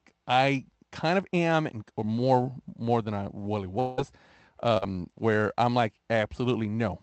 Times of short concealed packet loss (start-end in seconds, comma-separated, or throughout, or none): 4.77-4.84